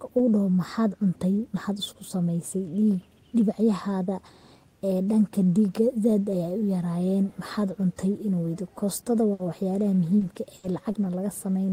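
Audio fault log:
9.33–11.05 s, repeated packet loss (robotic sound): right after "weydiyo kostoda", four gaps, the longest 60 ms, total 160 ms missing, are patched by repeating prior audio. This gives choppy speech. The spectrogram shows smeared, repeated frame blocks, and the waveform shows abrupt seams.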